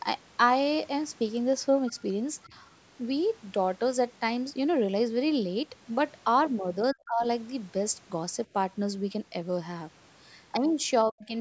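Speech recorded through a call's microphone path shows two echo-control faults. The echo canceller appears to have let some of the far end's loudspeaker sound reach the microphone: at 1.87–1.92 s a brief scrap of the other side's voice leaking through can be heard, faint at about 25 dB below the talker, a short burst rather than a sustained second voice. This is likely residual echo the canceller failed to subtract. Elsewhere the canceller seems to have mistaken the talker for echo while both sides were speaking, and its suppressor pulled the near-end level down. This speech suppressed in double talk is likely what happens at 2.48–2.53 s, where the voice dips by about 10 dB, and at 6.93–7.24 s and 11.04–11.34 s, where roughly 300 ms stretches drop by about 35 and 40 dB, nearly cutting the voice out. The audio has nothing above 8 kHz.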